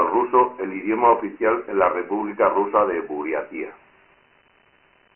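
Dialogic VOX ADPCM damage runs through the whole of this speech clip. Nothing reaches above 3.1 kHz, a cut-off that fits 4-bit ADPCM at 6,000 samples a second, about 24 kbps. The telephone-style band also thins the low end below 300 Hz. Each sample stores only a coarse 4-bit step, so the adaptive quantiser keeps lagging behind the waveform. The resulting heavy error is heard as a gritty hiss that rides along with the speech.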